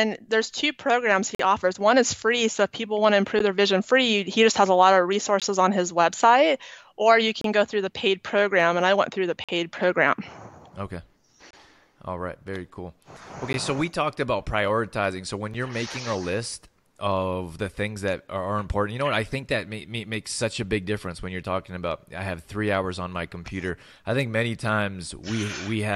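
Gaps between stream segments cut into the sound at 1.35–1.40 s, 3.39 s, 5.40 s, 7.41–7.44 s, 9.44–9.49 s, 11.51–11.53 s, 13.53 s and 15.54 s. They recur every 2 seconds. Segment timestamps misalign, so the player inserts silence. Each hole lasts 8 to 46 ms, with hard edges.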